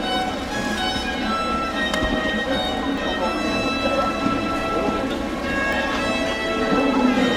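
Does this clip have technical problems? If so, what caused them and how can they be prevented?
Yes. At 2.98 s and again at 5.73 s the sound jumps forward abruptly, skipping around a third of a second each time, with the two sides butted together and no gap between them. The spacing matches a 3.0 s processing chunk, so this is likely audio missing between chunks, lost while one block closes and the next opens. Unlike a dropout, no silence is left behind; the material simply vanishes. Overlapping or double-buffering the chunks prevents this.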